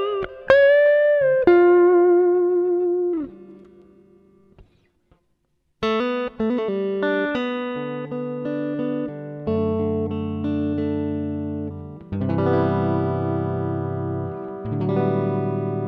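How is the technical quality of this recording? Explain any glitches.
No glitches or faults detected.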